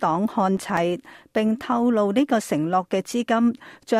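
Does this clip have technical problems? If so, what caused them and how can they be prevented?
Yes. Processor overload crackle runs from 0.57 to 0.77 s. The processor repeatedly missed its deadlines for buffers lasting a few milliseconds, and a handful dropped to silence. The waveform shows brief flat gaps with hard edges, and a spectrogram shows thin vertical broadband streaks. Reducing processing load or using a larger buffer prevents it.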